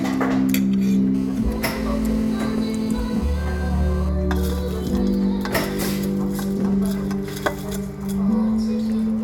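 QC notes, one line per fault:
1.15–4.09 s: GSM phone buzz, a hard, raspy drone at about 217 Hz, stacked with harmonics and sitting roughly 22 dB under the sound. It holds steady the whole stretch, which fits a nearby phone on a call, its bursts rectified by the audio circuit.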